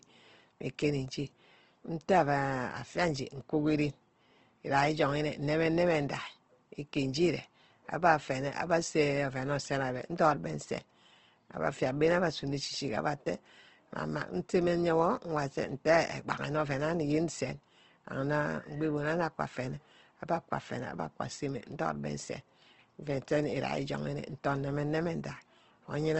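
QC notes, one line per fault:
Throughout: Opus compression, likely in CELT mode; the speech is grainy and rough rather than swirly like MP3, with nothing above 8.2 kHz, fitting a 16 kbps rate.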